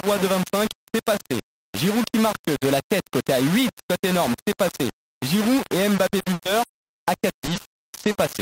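Low bit depth without dither runs through the whole speech clip. Every sample is rounded to very coarse steps, likely only 4 bits, so the error tracks the voice: a harsh, grainy distortion sits about 10 dB under the speech and sputters on the quietest parts.

Repeated packet loss (robotic sound) takes over from 5.95 to 8.17 s. Short gaps keep recurring, the longest about 100 ms, each patched by stretching the previous sound. About 680 ms is filled this way, roughly a third of the stretch, giving choppy, robotic speech.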